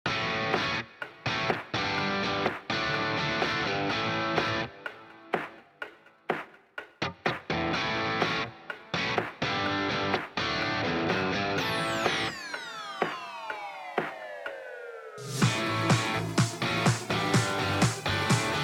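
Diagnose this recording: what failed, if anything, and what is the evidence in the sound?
Nothing failed in this recording, and the sound gives no evidence of a fault at any stage.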